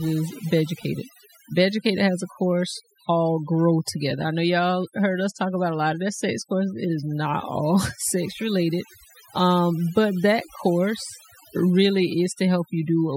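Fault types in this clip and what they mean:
overdone noise removal: Noise reduction pushed too hard on a noisy speech recording, running across the whole clip. Any frequency band the processor judges to be near its noise estimate gets pulled far down or switched off, so the background collapses into near silence dotted with twinkling specks, and softer parts of the voice are removed with the noise. Plain low-bitrate coding smears the sound with swirling artefacts but leaves the background hiss in place. Here it is gated away.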